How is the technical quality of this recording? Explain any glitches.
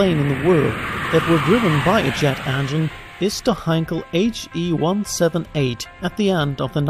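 No technical faults are audible.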